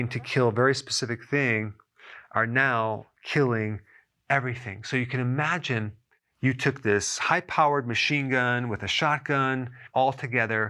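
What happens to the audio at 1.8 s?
Nothing goes wrong at 1.8 s; the audio plays through that moment intact, with no dropout, click or other fault.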